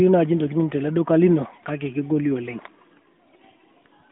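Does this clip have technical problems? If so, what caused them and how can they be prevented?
No, there are no technical problems to diagnose here. The speech comes through an AMR narrowband mobile codec working as intended, with a phone-line band of roughly 150 Hz to 3.7 kHz, nothing above about 3.8 kHz, and only light codec colouring that fits a higher-rate setting around 12.2 kbps.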